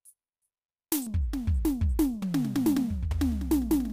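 A short music clip that goes dull at 1.07 s and stays that way to the end at 3.92 s. That's de-emphasis applied wrongly: a treble cut meant to undo pre-emphasis landed on audio that didn't need it, rolling the top end down to about 11 dB lower at 10 kHz than at 1 kHz, so everything sounds muffled.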